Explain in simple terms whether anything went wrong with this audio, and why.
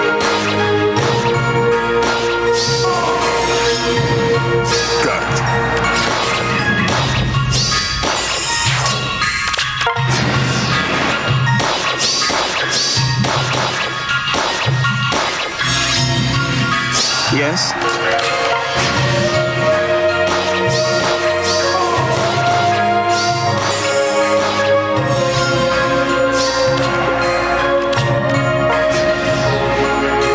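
Something's off the whole way through: gain pumping. Loud and soft parts end up closer together, so everything ends up squashed to a similar level. The likely cause is the mic gain set way too high, with a fast limiter yanking it back down each time.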